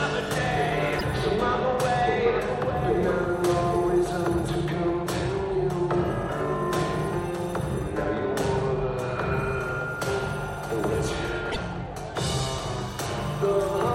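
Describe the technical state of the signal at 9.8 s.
At 9.8 s the signal is intact, with no dropout, clipping, glitch or other fault audible at that moment.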